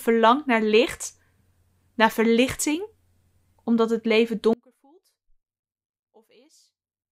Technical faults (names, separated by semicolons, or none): one channel inverted